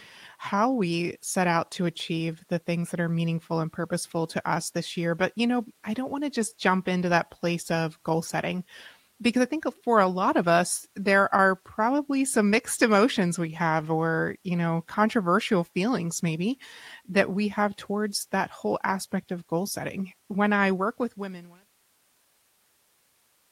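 No technical faults in the speech; the level eases down in a deliberate fade-out from about 20.5 s to silence at 21.7 s, with no click or hard edge.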